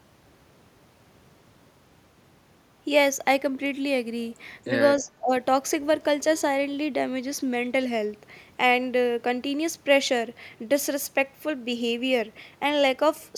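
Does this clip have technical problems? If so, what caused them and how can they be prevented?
Yes. Between 4.97 and 5.32 s there is speech suppressed in double talk, likely caused by an echo canceller that met both ends talking at once, could not tell the near talker from the loudspeaker echo, and turned the outgoing signal down. In total, roughly a third of a second of speech sinks by about 25 dB at its deepest, dipping before returning to full level. This can be prevented with a canceller that has reliable double-talk detection and gentler residual-echo suppression, or with a headset that keeps the loudspeaker out of the microphone.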